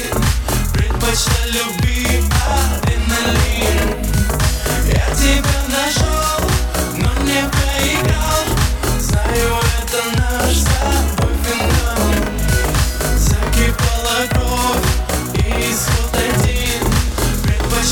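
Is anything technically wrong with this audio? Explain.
Yes. Throughout the whole clip, every sound arrives twice, a close doubling or slap echo at equal level. This is a channel delay (doubling): one channel runs 40 ms late, and when the two are summed to mono, the late copy stands apart as a separate repeat.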